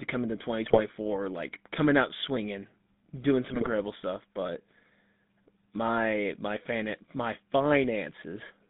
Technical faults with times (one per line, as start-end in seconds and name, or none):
0.00-8.69 GSM full-rate codec
0.64-0.80 GSM bit errors
3.51-3.69 GSM bit errors